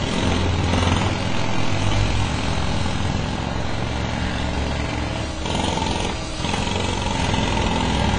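From start to finish the sound is dull, with nothing above 9.7 kHz. Smeared, warbling detail points to likely AAC compression at a low bitrate, around 24 kbps.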